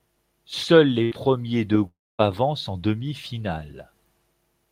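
At 1.03 s a burst of packet loss removes about 80 ms of audio. With nothing arriving, the receiver stretches the last speech sound for 74 ms and fades it until 1.13 s. The speech then resumes slightly further on.

From 1.87 to 2.21 s the stream cuts out for about 320 ms, likely a long network dropout. The final sound lingers as a short fading tail, then about 240 ms of silence follows, and the speech returns at "avancent en" with the intervening stretch missing.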